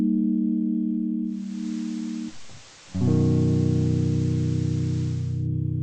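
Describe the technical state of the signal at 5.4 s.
At 5.4 s the music is still on the FM side of a digital radio blending to analogue, running from 1.23 to 5.49 s. The receiver dropped its digital stream, so hiss sits well under the music, level's about 1 dB down, and the return arrives moments later.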